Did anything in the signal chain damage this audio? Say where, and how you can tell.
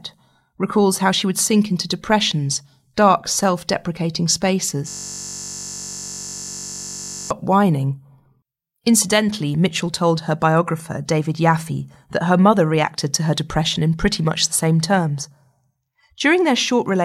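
Yes, at the driver or buffer stage. Right after "depressions dark self deprecating", from 4.88 to 7.31 s, the speech stops and a steady buzz at about 47 Hz takes over. That's a system hang loop: the host or driver stalled, and the audio hardware kept replaying the same 21.33 ms slice of its ring buffer, over a hundred times. A chunk that short, repeating exactly, fits a 1024-sample buffer.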